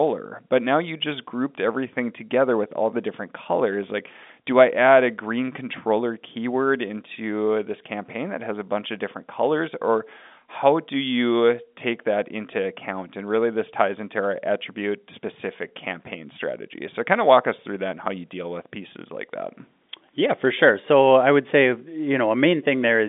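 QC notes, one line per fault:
Nothing to flag here; the speech just has the narrow telephone-line sound of G.711 coding, with nothing above about 3.8 kHz getting through.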